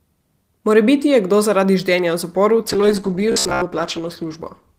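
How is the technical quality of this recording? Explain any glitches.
The recording has two faults, both in its second half.

From 2.68 s to the end there is a call bitrate drop. The connection's bandwidth estimate fell, so the encoder was told to spend far fewer bits, going from 32 kbps down to 10 kbps. It stayed at its lowest for about 1.19 s. With so few bits the codec quantises the speech coarsely and trims away the upper frequencies. The speech turns muffled and rough, with a watery edge.

Between 3.32 s and 3.62 s, inside that low-bitrate stretch, the speech takes on a robotic sound from repeated short buffers. For those 0.3 s it becomes a stiff, metallic buzz near 67 Hz. It still loosely tracks the syllables. The likely cause is audio arriving too rarely, with the player looping its last short buffer to fill the gaps while real audio is skipped. Most of the stretch is repeats. A 67 Hz buzz fits a buffer of about 15 ms.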